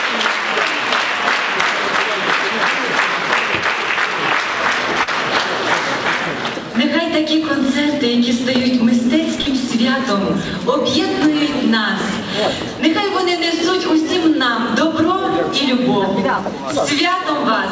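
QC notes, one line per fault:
5.03–5.09 s and 9.41–9.47 s, short concealed packet loss: about 40 ms of audio arrived too late each time. The receiver filled the gap by extending the preceding sound, from its pitch or as shaped noise, then blended back, leaving a brief smear or wobble.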